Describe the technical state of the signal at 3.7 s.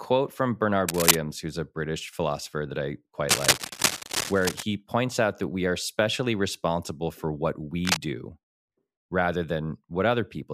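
At 3.7 s the speech is overlaid by cable scratch noise, running from 3.28 to 4.63 s. It sounds like dense, ragged scratching, roughly as loud as the speech. A worn cable or connector being moved likely caused it, its contact resistance fluctuating rapidly.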